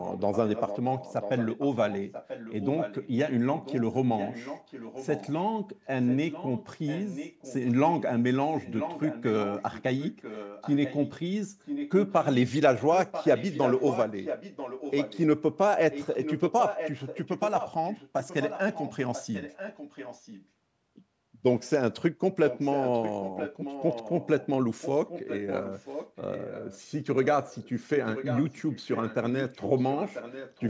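Echo leak runs through 0.02–5.5, 6.06–8.01, 8.55–11.11, 11.65–12.26, 12.91–15.19, 15.91–20.47 and 22.48–30.7 s: a copy of the speech, roughly 5–15 dB below it, trails it by 990 ms, likely incomplete echo cancellation on a far-end loudspeaker.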